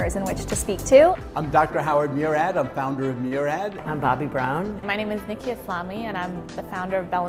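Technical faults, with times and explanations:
3.27 to 3.33 s, short stall from a late packet: a packet arrived behind schedule, the jitter buffer ran dry, and the receiver held the last sound for about 39 ms until it came, then resumed where it stopped, so nothing is lost but that moment drags with a faint buzz or dip.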